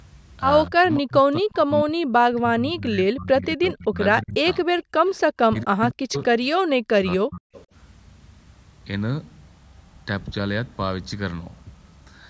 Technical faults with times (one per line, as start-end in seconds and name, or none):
0.69-4.66 speech suppressed in double talk
4.78-5.20 echo leak
4.94-5.05 background gated by the echo canceller
5.49-6.30 speech suppressed in double talk
5.58-5.63 echo leak
6.80-7.50 speech suppressed in double talk
7.54-7.64 echo leak